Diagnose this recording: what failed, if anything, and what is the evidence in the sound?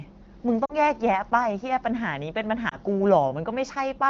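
Lost AMR speech frames, at the network (radio) stage. At 0.65 to 0.74 s the speech briefly smears and dips, and at 2.70 to 2.76 s there is a shorter warble. The gaps, about 40 ms and 20 ms, fit two 20 ms frames and then one. The decoder bridged each gap by repeating its last pitch and vocal tract settings at falling gain. A buffer underrun would leave a hard hole or click, but here the sound is held and then faded. The AMR wideband codec itself is only lightly coloured.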